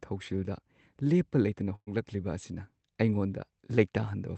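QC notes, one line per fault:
1.75–1.89 s, burst of packet loss: lost packets are concealed by stretching the last speech sound for about 110 ms while fading it, with around 60 ms near-silent, then playback resumes with roughly 120 ms of speech skipped.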